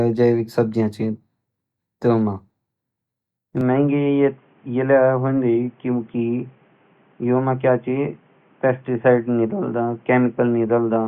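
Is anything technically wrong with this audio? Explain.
Yes. From 3.61 s to the end, the speech abruptly loses its top end, which points to the input likely having switched to a poorer device, such as a different microphone or a headset call profile. That narrower path passes nothing above 3.5 kHz, so the voice turns dull and boxy with no gap at the change, and a faint new background noise appears well below the speech. On a spectrogram, energy above 3.5 kHz is cut off sharply at 3.61 s; the waveform's overall level barely shifts.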